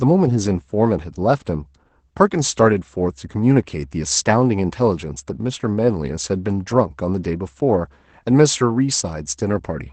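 Opus voice compression runs through the whole clip, its SILK linear-prediction coder working at a rate that fits about 12 kbps in wideband mode. Nothing survives above 8.8 kHz, and coarsely coded excitation leaves the speech plainly muffled, hoarse and slightly robotic.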